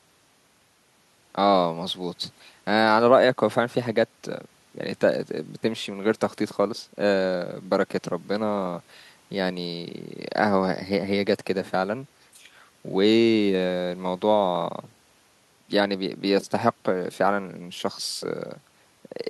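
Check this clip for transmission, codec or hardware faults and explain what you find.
No faults found here.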